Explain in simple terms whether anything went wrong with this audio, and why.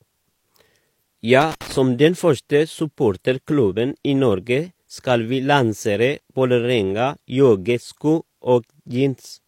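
One thing went wrong. From about 1.41 to 1.77 s the speech is broken up by a short, uneven burst of scratching and crackle. That is loose connector crackle: a worn or dirty plug briefly loses and regains contact, chopping the sound on and off. The irregular rhythm gives it away. A digital glitch repeats more evenly, and distortion from overly loud audio follows the loudness of the speech, not a wobbling contact.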